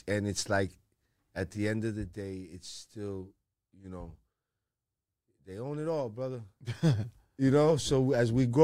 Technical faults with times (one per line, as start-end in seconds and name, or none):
none